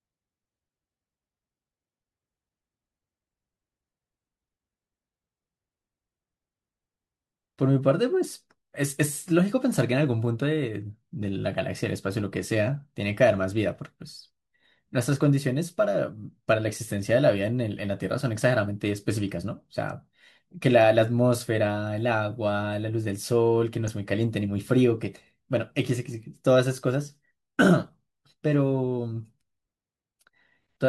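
At 16.67 to 16.70 s, and again at 23.88 s, the speech is interrupted by a corrupt frame decoded. Each event is a short chirp-like blip lasting about the span of a single codec frame. Flipped bits in the compressed data led the decoder to misread gains or spectral codes and place energy at the wrong frequencies. The first burst peaks at roughly −25 dBFS, and the second is louder at around −20 dBFS.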